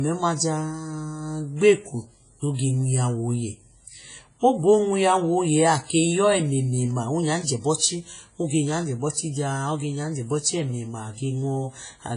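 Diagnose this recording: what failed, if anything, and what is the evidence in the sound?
Speech rings and sounds washy for the whole clip. A hiss breathes up and down with the speech. Nothing is heard above 10.5 kHz. The stage is the codec: likely heavy WMA compression, which fits an early WMA encoder near 24 kbps.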